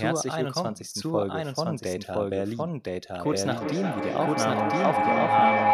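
Speech runs with a doubled audio track throughout: a second, full-band copy trails about one second behind at roughly the same level, dry and without any room tail. The likely cause is the signal being captured again through a slower path or an edit leaving two copies out of step. From 3.25 s to the end, a feedback howl builds as the microphone-to-loudspeaker loop gains level on each pass, narrowing to a tone around 700 Hz that pulses roughly every 400 ms and peaks about 5 dB above the speech.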